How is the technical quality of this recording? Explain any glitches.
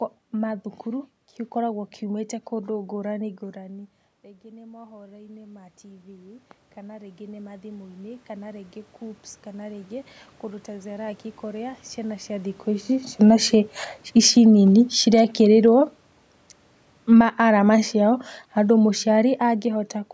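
The recording has a few level swings caused by the automatic gain control chasing the speech, so the loudness pumps in places.

Automatic gain rising, from 3.39 to 11.85 s and again from 17.31 to 17.89 s: after the talker dropped back, with the input falling by about 20 dB, the control slowly added about 16 dB, so voice and room noise swell up together until "ciana cia thikũ ici". The second rise is a brief nudge of about 4 dB.

Automatic gain falling, from 13.07 to 16.21 s and from 16.97 to 19.99 s: right after "ciana cia thikũ ici" the control pulls back by about 5 dB and then about 6 dB. The voice and its background sink together.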